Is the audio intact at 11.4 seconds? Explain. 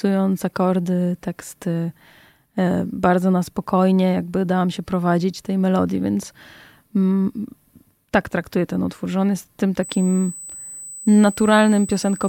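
No. USB whine runs from 9.83 s, just after "że on jest tym", to 12.28 s. Current drawn in 125-microsecond USB microframes leaks through power or ground, giving a steady fixed-pitch 8 kHz tone about 15 dB below the speech.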